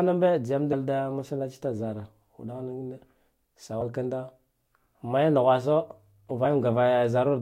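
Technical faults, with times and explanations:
0.72–0.74 s, 3.80 s and 6.44 s: compressed frames skipped. The audio jumps ahead by roughly a tenth of a second at the first point and roughly 50 ms at the others, as whole frames go missing or are rejected. The waveform shows a discontinuity with no gap, and the spectrogram a narrow vertical smudge.
5.79–7.24 s: mains hum. A steady 50 Hz tone sits about 35 dB below the signal, coupled in from the power line through a ground loop or nearby transformer. It appears as a thin, unbroken horizontal line near the spectrogram floor, and as a faint low ripple under the waveform.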